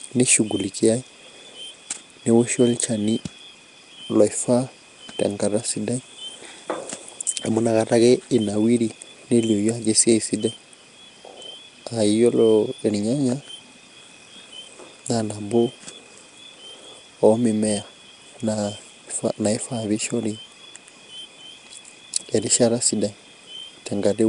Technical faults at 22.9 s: Nellymoser compression

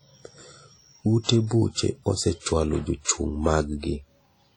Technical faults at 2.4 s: WMA compression

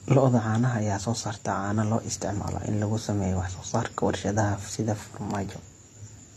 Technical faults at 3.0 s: transcoding between lossy codecs

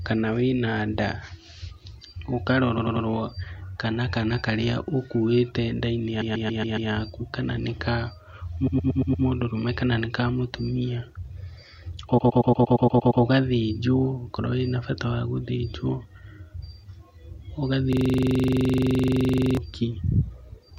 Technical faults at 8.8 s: repeated frames

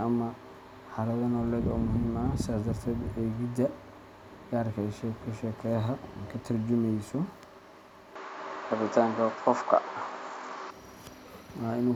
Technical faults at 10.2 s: input switched to a poorer device

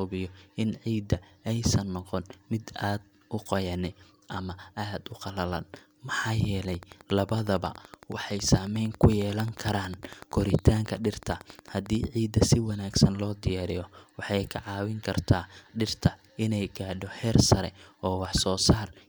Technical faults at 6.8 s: train of clicks

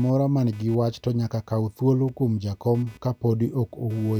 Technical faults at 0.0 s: computer activity noise

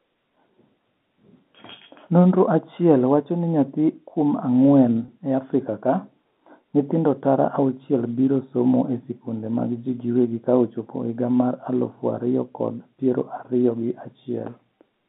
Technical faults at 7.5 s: none

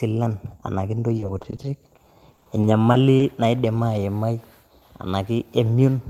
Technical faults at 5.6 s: none

